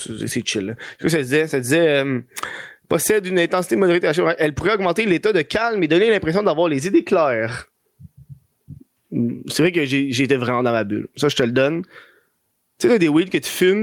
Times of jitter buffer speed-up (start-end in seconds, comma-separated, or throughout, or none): none